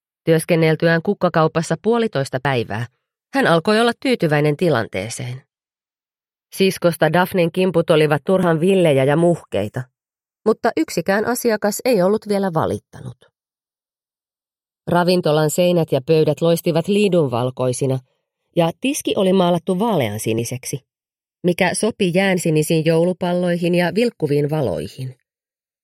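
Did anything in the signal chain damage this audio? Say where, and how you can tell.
Yes, in two places. Across the whole clip there is a slow, sweeping flange. It comes from the channels being summed to mono, as comb notches glide gradually through the spectrum. This is channels drifting apart at the converter stage. Left and right were captured on devices running from separate clocks. A clock mismatch of roughly 20 ppm lets the inter-channel delay creep steadily, reaching around half a millisecond by the end. That moving delay is what slides the notches.

There are also three brief skips, at 2.45 s, 8.43 s and 20.39 s. At each one, roughly 20 ms of sound vanishes and the two sides butt together with no gap of silence. The skips fall on a 6-second grid, and the jump from 8.43 s to 20.39 s spans two periods. That regular spacing points to audio missing between chunks, likely in the recorder's buffer handling. 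The recorder writes in 6-second blocks and drops a sliver each time it closes one block and opens the next.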